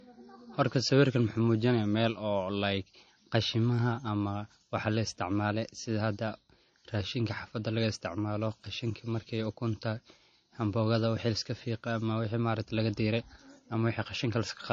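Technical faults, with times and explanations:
Throughout: low-bitrate audio saved at a high bitrate. Nothing is present above 9.3 kHz, and the speech keeps the coarse artefacts of a 32 kbit/s MP3. This is likely a later high-bitrate re-encode, which cannot restore what the first encoding removed.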